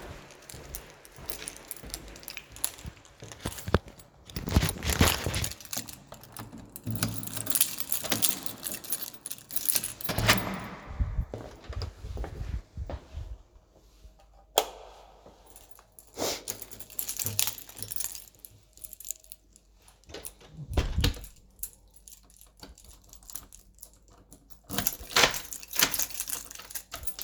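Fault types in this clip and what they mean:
No technical faults can be heard anywhere in these sounds. There is nothing to list for any part of the recording.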